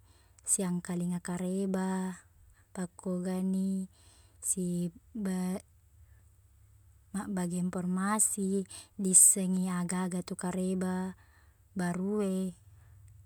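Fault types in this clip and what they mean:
No technical faults can be heard in the speech; the signal keeps a steady level and continuous timing, with nothing added or missing.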